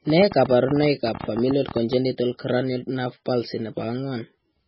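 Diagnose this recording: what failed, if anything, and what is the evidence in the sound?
At the codec stage, likely heavy MP3 compression at a very low bitrate, consistent with 16 kbps: the speech has nothing above 5.5 kHz and sounds watery and swirly throughout.

A train of clicks, likely from interference or a faulty connection, puts around twenty irregular pulses (about 12 per second, peaking about 5 dB above the speech) from 0.10 to 1.94 s, just before "cranial nerve palsy".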